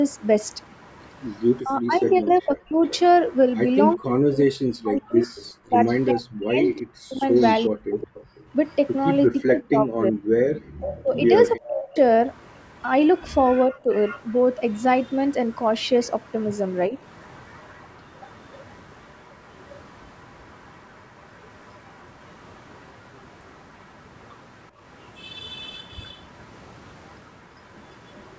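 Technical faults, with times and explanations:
0.09–8.95 s and 10.81–28.38 s, echo leak: a faint delayed copy of the speech trails along, about 25 dB down with a 378 ms lag in the first stretch, then quieter at about 35 dB down and 392 ms later. That's likely a speakerphone whose echo canceller let some of its own playback slip back into the call.
1.61–11.98 s, 13.67–13.89 s and 16.89–16.94 s, speech suppressed in double talk: the talker's level sags and chops while the other end is talking. In the first run it drops hard, by something like 40 dB, for around five seconds in total. The later two are brief dips of roughly 15 dB and 5 dB. This is likely the canceller mistaking overlapping talk for echo and clamping everything down.
10.50–10.69 s, background gated by the echo canceller: the room sound briefly falls away by about 40 dB for around a fifth of a second, then comes back. The canceller slammed the mic down while the far-end audio played and released it once things settled.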